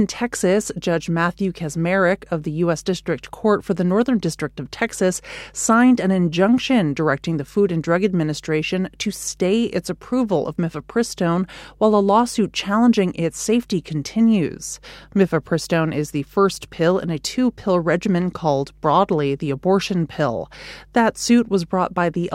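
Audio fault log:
Throughout: mains hum, a steady 50 Hz drone sitting about 30 dB under the speech, probably a ground loop or nearby transformer leaking the power line in.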